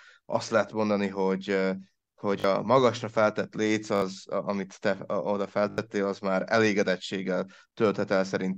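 At 2.4, 3.96 and 5.7 s the speech stutters with a repeated buffer. Fresh audio arrived late, so one slice, fitting a 20 ms buffer, replayed two, three, then four extra times with hard joins. The result is a short stutter, not a dropout's silent gap.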